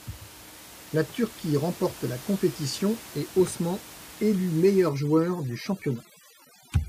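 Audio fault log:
4.89–6.88 s, overdone noise removal: to the end, room noise about 19 dB below the speech drops and breaks up into twinkling specks, as heavy reduction cuts any frequency band near its noise estimate, quiet speech detail included.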